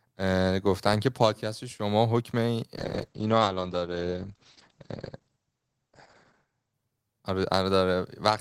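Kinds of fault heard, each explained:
Call bitrate drop: from 2.83 s the encoder's rate falls from 40 kbps to 9 kbps, holding at the lowest for about 3.4 s. Coding turns coarse and the audio bandwidth narrows from 20 kHz to 8 kHz, so the speech sounds rough and muffled until 8.11 s.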